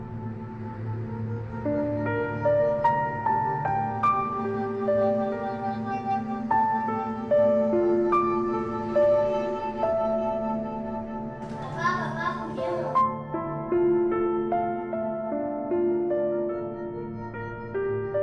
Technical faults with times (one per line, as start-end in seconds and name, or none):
none